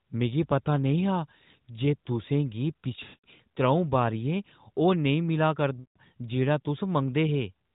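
From 3.04 to 3.26 s and again from 5.80 to 5.98 s, the speech smears into a drawn-out, fading sound before recovering roughly. These are lost AMR speech frames: the narrowband decoder repeated its last good pitch and vocal-tract settings with falling gain across the 200 ms and 160 ms gaps.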